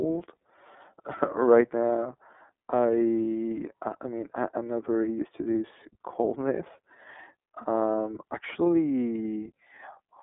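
From start to finish the speech carries iLBC codec damage: nothing passes above about 3.7 kHz, and the band sits roughly between 250 Hz and 3.5 kHz, giving a telephone-line tone. Each 30 ms block is coded independently, so the voice sounds plainly rough and slightly synthetic, which points to the 13.33 kbps mode. A simple band-limit would narrow the sound while leaving it smooth. Here the buzzy, artificial texture marks a low-rate speech codec, with no gaps or dropouts.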